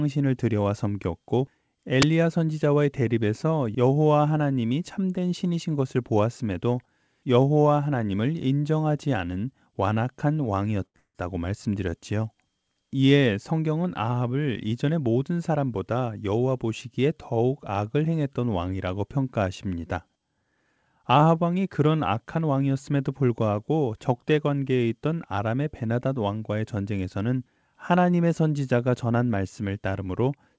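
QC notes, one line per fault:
2.02 s, uninitialised buffer. A loud, sharp burst of digital noise cuts into the speech. It lasts about 12 ms, which fits one 512-sample buffer being played before any audio was written into it. The output read whatever was left in memory and sent it out as samples. Those values bear no relation to the signal around them. So the burst is harsh and sudden.
10.86 to 10.96 s, short stall from a late packet. A sound is held for about 84 ms longer than it should be, with a slight buzz or dip. A packet arrived late, and the jitter buffer ran dry. The receiver stretched the last stretch of audio to fill the wait. When the packet came, playback went on from the same point. Nothing is lost. The sound is simply drawn out, and the delay grows by 84 ms.
10.96 to 11.17 s, call audio freeze. This follows straight on from the stall. The held sound turns into a fading buzz or hiss and then about 50 ms of silence. 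In all, 182 ms is filled in. The likely cause is a longer hold-up of packets on the way, which left the jitter buffer empty again. The receiver faded its made-up continuation toward silence while it waited. The speech then resumes where it stopped. A gap has been inserted, but nothing is missing.
14.48 to 15.23 s, jitter buffer speed-up. The speech runs about 10% fast here, at the same pitch, and sounds hurried. The buffer was holding more audio than it aims for. To bring the delay back down, the receiver cut out many short pieces, each one or a few pitch periods long. In total, about a tenth of a second was removed. Because whole pitch periods went, the pitch stays put while the pace rises.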